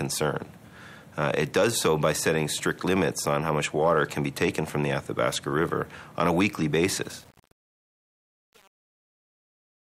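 From 7.02 s to the end at 9.9 s, the fade-out suffers truncation distortion on a fade. The gain stage rounds each sample to a coarse grid and adds no dither to mask the error. As the level drops, fewer steps remain, so the waveform turns blocky and square. The step size fits a 7-bit stage. The distortion is at its worst across the whole span. The tail of the sound grows gritty as it fades.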